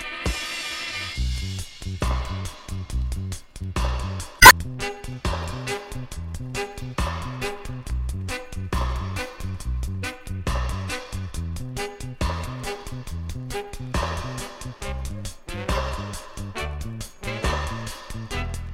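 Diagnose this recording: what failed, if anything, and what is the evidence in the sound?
The codec stage failed: damaged data in the compressed stream produces a brief glitch from 4.38 to 4.52 s. Corrupted frames there were misdecoded or rejected, so the decoder lost sync for about 0.14 s and resumed only at the next valid frame header.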